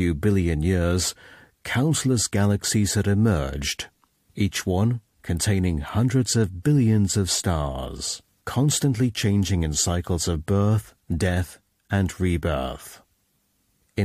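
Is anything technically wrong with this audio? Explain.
No, nothing technically wrong can be heard here.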